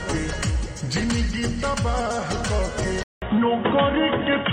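At 3.03 s the sound drops out for about 0.19 s, then resumes through a different-sounding path until the end. After the gap nothing remains above 3.8 kHz, so the audio turns dull and boxy, the level shifts by around 5 dB, and a new noise floor appears roughly 35 dB below the signal. This is likely an input switched to a poorer device, such as a headset in call mode, with its narrower band, its own tone and its own background noise.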